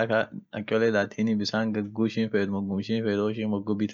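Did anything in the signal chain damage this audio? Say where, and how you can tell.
Yes. Clock slip clicks run from 0.35 s to the end, faint ticks about every third of a second, around fifteen in all, likely from two converters on unsynchronised clocks each dropping or repeating one sample. They appear as thin full-height vertical lines on a spectrogram and tiny waveform discontinuities.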